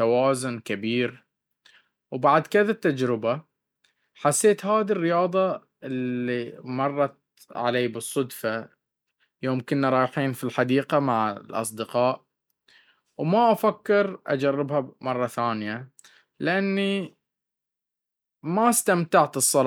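No technical faults can be heard at any point in this speech recording, so there is nothing to describe in time order.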